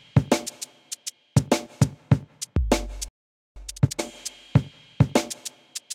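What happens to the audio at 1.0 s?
Nothing goes wrong at 1.0 s; the audio plays through that moment intact, with no dropout, click or distortion to be heard.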